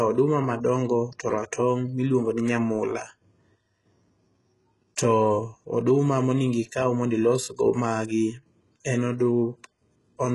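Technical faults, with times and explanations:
Throughout, HE-AAC compression. The speech sounds heavily coded, and nothing reaches above 11.5 kHz. The treble stays bright, but it is synthetic. The likely cause is a codec that sends only the lower band and rebuilds the top by copying lower bands upward under a coarse envelope. The rebuilt harmonics do not line up with the real ones. So s sounds come out gritty, metallic or lispy. The damage fits a very low bitrate, around 12 kbps.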